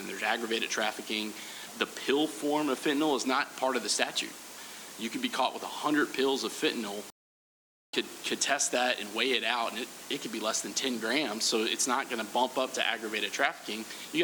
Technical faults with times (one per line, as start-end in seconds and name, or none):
7.10-7.93 playback stall